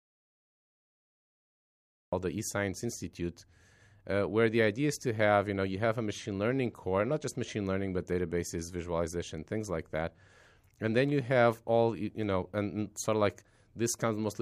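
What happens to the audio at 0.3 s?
At 0.3 s you're inside an audio dropout to silence that's already running when the clip starts and lasts until about 2.13 s: plain silence, no room tone at all. Likely the input dropped out and the recorder kept writing silence, so speech then just cuts in.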